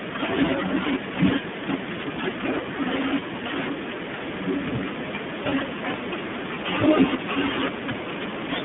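Throughout the recording the speech carries the sound of the iLBC codec, a narrowband VoIP coder. The audible band runs from about 150 Hz to 3.5 kHz, so the upper harmonics and sibilant detail are gone. Each 20 ms frame's excitation is coded on its own, and the result is plainly rough and slightly synthetic. That roughness is consistent with the 15.2 kbps mode.

From 3.20 to 3.23 s, and again from 5.50 to 5.53 s, there are lost iLBC frames. Each gap fits a single missing 20 ms frame. The decoder fills the hole by repeating the last pitch cycle blended with noise, which is heard as a brief held, faintly buzzy vowel. Because iLBC frames decode independently, the speech snaps back to normal immediately after each gap.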